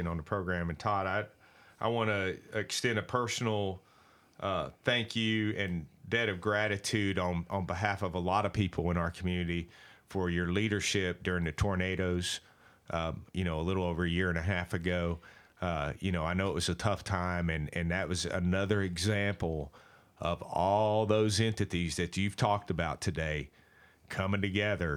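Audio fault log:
Nothing stood out on listening to this speech recording.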